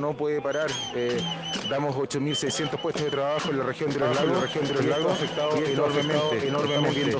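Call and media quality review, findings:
Doubled audio track, 4.02 s to end. Likely a second capture path running late, or an edit holding two misaligned copies. A full-band duplicate about as loud as the original trails by roughly 0.7 s, starting abruptly, with no decay or room colour.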